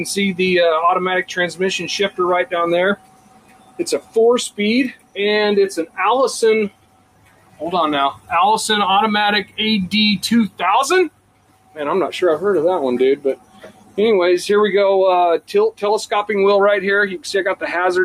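From start to end, a noise suppressor built for speech is applied to this sound. It treats steady tones, ambience and decay as noise. Onsets get through, but anything held is pushed down. Its gain swings by around 15 dB. The result pumps and thins. Sustained parts sag, then bounce back when a new attack arrives. Tails do not ring out naturally. They are clipped short and leave a dry, hollow gap.

Seven passages are hit hardest, where the sound is cut by the noise suppressor: 2.96 to 3.82 s, 3.99 to 4.16 s, 4.91 to 5.17 s, 6.69 to 7.62 s, 8.12 to 8.31 s, 11.09 to 11.78 s and 13.17 to 13.98 s. Each drop reaches about 16 to 18 dB. The longer dips sound like the sound sinking away. The short ones read as brief flutters.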